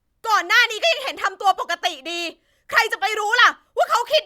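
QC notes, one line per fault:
No audible faults or glitches in the speech.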